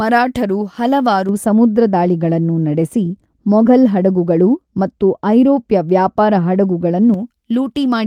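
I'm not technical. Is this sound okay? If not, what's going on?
No. From about 1.29 to 7.14 s the speech turns dull and muffled, because de-emphasis was applied wrongly, cutting treble as if to undo a boost that needed no undoing.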